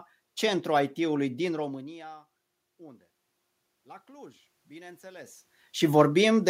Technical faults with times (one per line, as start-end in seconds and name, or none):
4.05-5.43 automatic gain rising